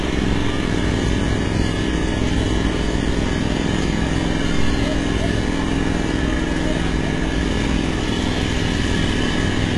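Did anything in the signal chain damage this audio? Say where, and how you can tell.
Yes, at the codec stage. Throughout, nothing reaches above 11.4 kHz, and the treble sounds bright but gritty and metallic rather than dull. That points to heavy HE-AAC compression at a very low bitrate, likely around 12 kbps, where copied, mismatched upper bands give it away, unlike a plain low-pass.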